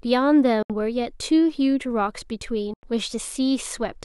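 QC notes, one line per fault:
0.63–0.70 s and 2.74–2.83 s, Bluetooth dropout: the speech cuts to silence for about 70 ms and then about 93 ms, and resumes further on, as if it had kept playing unheard. This is likely caused by packets failing to reach the headphones in time, with gaps that fit three or four lost packets. The waveform shows flat-line holes, and the spectrogram shows clean vertical blank bands across all frequencies.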